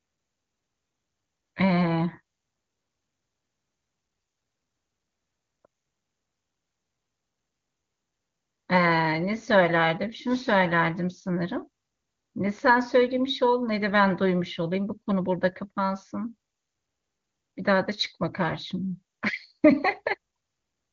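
No technical faults occur at any point in this speech, which carries only the faint or absent coloration of AMR wideband (HD Voice) coding at 23.85 kbit/s.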